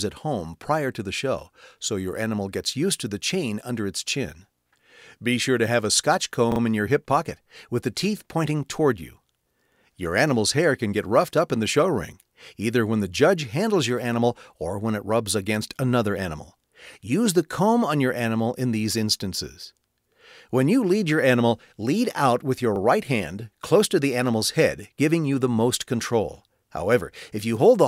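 Repeated buffer at 6.52 s and again at 22.76 s: fresh audio arrived late, so the same 40 ms block played again, three times in all at 6.52 s and twice at 22.76 s, with hard joins heard as a brief stutter, and nothing appears to be lost.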